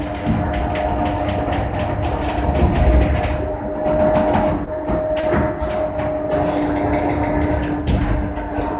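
At 4.65 to 4.69 s and again at 5.21 to 5.25 s, short concealed packet loss occurs. About 20 ms of audio failed to arrive in time, and the receiver extended the preceding sound to cover each gap before crossfading back to the real signal. Each spot is heard as a brief smear or wobble, with a short transient possibly swallowed. The whole call path stops at 4 kHz, which points to G.711 mu-law.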